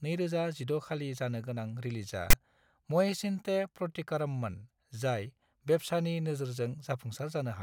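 At 2.30 s the speech is cut into by a short burst of harsh static lasting until 2.33 s, about 28 ms. This is file tags played as audio: a block of text metadata has been decoded as if it were sample data. Because text bytes cluster in a narrow range of values, the result is a loud rasp pushed well off centre to one side rather than balanced noise. Its onset and end are abrupt, with no fade.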